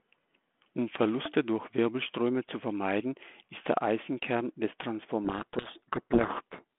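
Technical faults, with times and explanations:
5.25–6.64 s, codec payload misread: speech drowns in harsh distortion, as the 32 kbit/s G.726 code words are decoded with their bits in the wrong order.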